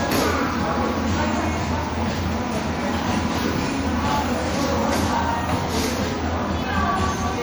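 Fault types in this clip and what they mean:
MP3 compression: A plainly audible watery, swirling texture runs through the whole clip, with metallic chirps on bright, hissy sound and smeared attacks, likely from MP3 encoding at a rate that fits about 64 kbps. Starved of bits, the encoder cuts off the treble and drops weak frequency lines that flicker on and off between frames. On a spectrogram this shows as a flat ceiling above which energy vanishes, with speckled holes below it. The waveform shows softened transients.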